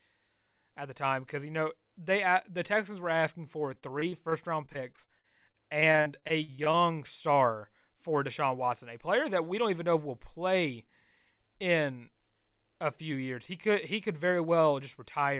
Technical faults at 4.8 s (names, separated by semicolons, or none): repeated packet loss (robotic sound)